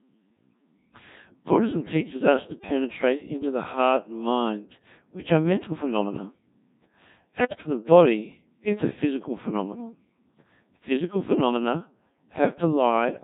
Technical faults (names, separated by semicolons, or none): Codec 2 vocoder; bit errors on digital voice radio